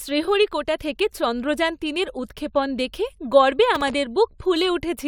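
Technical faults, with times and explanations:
3.73 to 3.94 s, processor overload crackle: a gritty, tearing crackle rides on the speech for about a fifth of a second and then clears. The processor fell behind on its very short audio buffers, each well under a millisecond, and missed a dozen or more deadlines over that stretch. Each miss replayed a sliver of old audio with hard edges, and that rapid string of tiny stale fragments and discontinuities is heard as the crackle.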